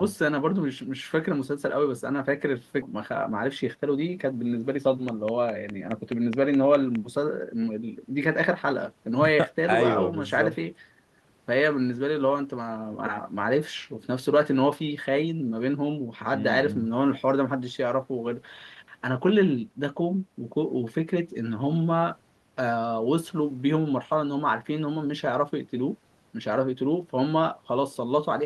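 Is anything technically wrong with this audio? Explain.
Yes, there are three faults, all in the first seven seconds of this speech clip.

Skip ahead, 2.81 to 2.83 s: about 0.7 s of speech vanishes and the two sides are spliced with no gap. Audio was dropped while later audio was already waiting, so the delay drops at once. Unlike a dropout, nothing is filled or silenced. The speech simply jumps forward mid-flow.

Jitter buffer speed-up, 2.93 to 4.94 s: with a backlog still queued, the receiver trimmed short pitch-period slices repeatedly, removing about 0.15 s in total. The speech runs at 108% speed and sounds hurried, but its pitch stays put. That unchanged pitch separates it from a sample-rate mismatch, which would raise the pitch too.

Train of clicks, 5.09 to 6.96 s: about ten near-identical pops arrive at a regular 4.82 per second, peaking about 10 dB above the speech. The steady pace and matching shapes point to a likely external source such as equipment interference, rather than random decoder glitches, which would be irregular and varied.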